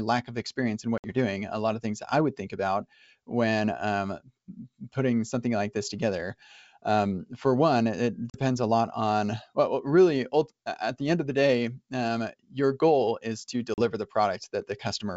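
At 0.98 to 1.14 s, after "lack of experience in" and before "doing a lot of", packet loss on an ADPCM call cuts a hard-edged 60 ms silence. The same fault removes 40 ms at 8.30 to 8.37 s, between "um for one it" and "a lot on well", and again at 13.74 to 13.79 s, after "your goal is to". Unlike a plain dropout, each gap ends with a brief, slightly distorted restart while the G.722 wideband decoder's predictor and step size resynchronise.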